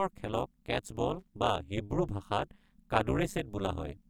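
Right from the start and through the whole speech clip there's overlap-add ripple. The frames were stitched back together with an overlap that doesn't sum to a steady gain, so the level dips by about 60 dB once per frame, around 200 times a second. That gives a harsh, metallic buzz with extra tones on everything.

Then from 1.15 to 1.29 s there's a short burst of loose connector crackle. A contact is making and breaking quickly, so the signal gets chopped. It comes across as a brief, irregular scratchy crackle sitting over the sound.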